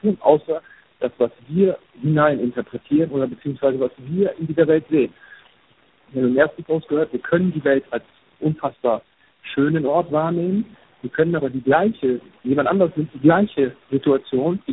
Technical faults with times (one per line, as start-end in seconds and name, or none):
0.00-14.73 noise suppressor artifacts
0.00-14.73 tandem speech coding